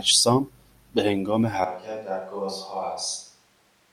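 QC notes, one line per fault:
1.64 s to end: likely a switch to a distant microphone; speech abruptly turns hollow, roomy and bass-light, about 10 dB quieter, unlike a plain gain drop.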